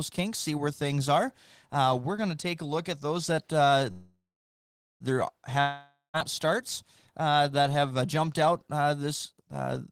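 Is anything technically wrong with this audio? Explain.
Yes. There are two faults in this speech.

From 3.91 to 5.03 s, just after "at those that uh", there is a call audio freeze. Incoming packets were likely held up, so the jitter buffer ran dry. The receiver stretched the last sound into a fading buzz for about 1.09 s, and 0.8 s of that is silence. The speech then resumes where it stopped. Nothing is lost, but everything after this point plays about 1.09 s late.

From 5.60 to 6.17 s there is a long network dropout. Audio likely stopped arriving entirely. Again the last sound is drawn out as a decaying buzz, this time about 0.53 s long, ending in 0.16 s of silence. When the speech returns, it jumps ahead. About 0.54 s of it is simply gone.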